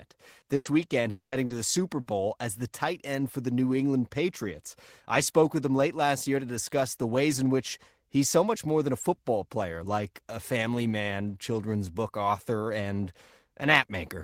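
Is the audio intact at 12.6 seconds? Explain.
Yes, the audio is intact at 12.6 seconds, with no dropout, click, distortion or other fault in the speech at that moment.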